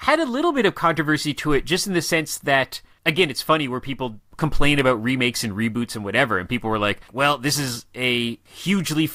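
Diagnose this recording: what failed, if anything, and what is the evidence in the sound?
Nothing failed here as far as I can hear: the speech comes through without any dropouts, glitches or other audible trouble at any stage of the chain.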